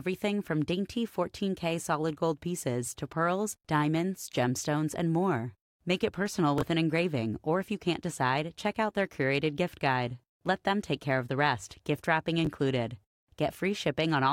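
Speech, with chunks out of order twice: a chunk of about 11.6 ms arrived late and played after its successors, two chunks late at 6.58–6.62 s after "it personal" and one late at 12.45–12.47 s after "rest gift wrapping", each giving a brief jumbled stutter.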